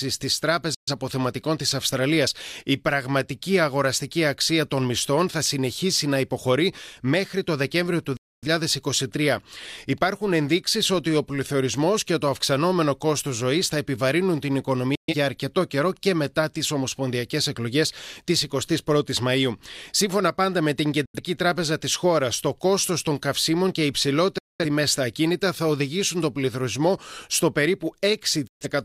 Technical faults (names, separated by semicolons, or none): digital broadcast dropout